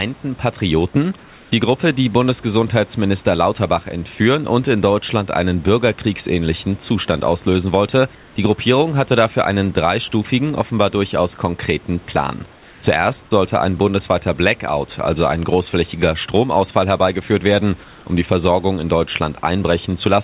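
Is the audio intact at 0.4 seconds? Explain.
Yes, the audio is intact at 0.4 seconds, with no dropout, glitch or other fault at that moment.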